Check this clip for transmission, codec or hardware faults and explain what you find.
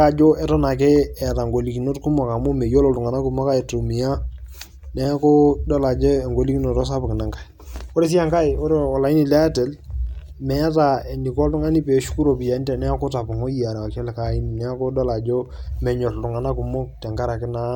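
No transmission, codec or hardware faults turn up in this clip.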